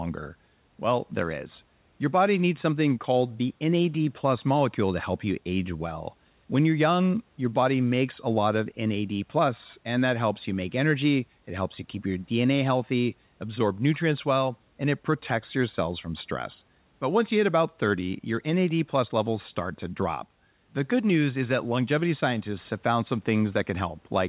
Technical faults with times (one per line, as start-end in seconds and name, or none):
none